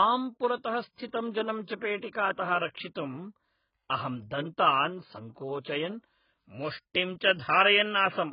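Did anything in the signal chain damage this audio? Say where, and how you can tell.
Yes. The speech is dull and smeared throughout, with nothing above 5.1 kHz. This points to the codec stage, likely AAC compression at around 12 kbps.

Pre-echo, also from the codec: brief hiss precedes attacks at 1.64–1.68, 1.78–1.82, 1.97–2.03 and 5.61–5.65 s. Quantisation noise spread across each block arrives 33 to 53 ms early.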